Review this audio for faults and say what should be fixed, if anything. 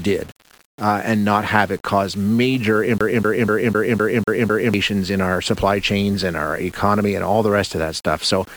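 Throughout the speech a grainy, gritty distortion follows the voice. Quiet passages and word endings turn rough and sputtery, with the grit only about 25 dB below the signal. The cause is likely low bit depth without dither: the audio was rounded to what sounds like about 7 bits, so the error tracks the signal instead of forming a steady hiss. Prevent it by keeping a higher bit depth and applying dither whenever bit depth is reduced.

From 2.98 s to 4.74 s, just after "have it cause major", a fast, even stutter plays the same 0.25 s fragment seven times, with a brief mute at each jump, before "in our supply chains" continues. This is a CD stuck on one turn: a scratch throws the laser back one track on every revolution of the disc. Prevent it by ripping from a clean disc with error-checking extraction.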